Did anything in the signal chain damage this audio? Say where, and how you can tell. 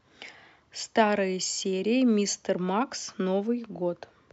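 Yes: the resampler restarted on every block throughout, giving a 100 Hz buzz only under speech, consistent with 10 ms blocks converted separately, each edge mis-interpolated.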